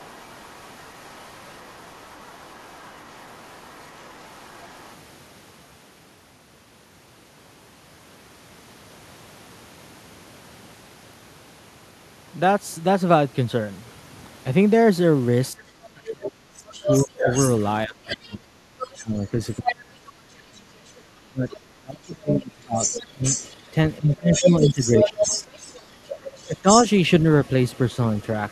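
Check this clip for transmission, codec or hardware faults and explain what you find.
Two echo-path faults affect the speech: the far end's voice leaks through in several stretches, and the talker is suppressed during double talk.

Other side's voice leaking through, from 0.0 to 4.95 s, 16.07 to 20.59 s, 21.50 to 21.57 s, and 22.8 s to the end. The echo canceller likely failed to fully remove the loudspeaker signal from the microphone pickup. The first stretch is faint, about 30 dB below the talker, and the brief blip near 21.5 s is about 20 dB down. From 16.07 s and again from 22.8 s the second voice sits only about 5 dB under the talker.

Speech suppressed in double talk, between 15.51 and 25.25 s and again from 26.47 to 26.67 s. With both parties talking at once, the canceller likely could not separate the near talker from the echo and turned everything down. In the longer span the talker's level drops by as much as about 30 dB, for about five seconds in total, and overlaps the strongest leakage. 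The short later dip is shallower, about 10 dB.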